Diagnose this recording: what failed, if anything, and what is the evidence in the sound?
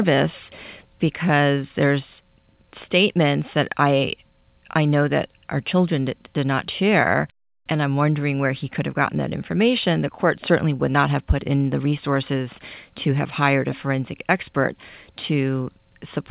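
Nothing in the recording points to a failure at any stage. The speech comes through a call path with no content above 4 kHz, which fits a narrowband G.711 A-law codec running at 64 kbps.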